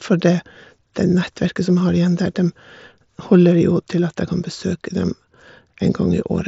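No technical fault is present in this speech clip, which carries the band limit of a wideband Bluetooth mSBC headset link, with nothing above about 7.7 kHz.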